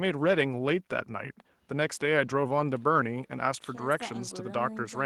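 No technical faults are audible.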